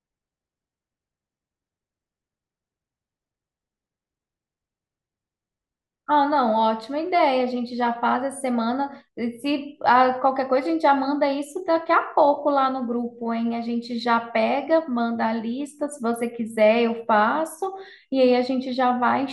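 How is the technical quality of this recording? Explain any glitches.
Nothing to flag here: the speech comes through without any glitches worth pointing out.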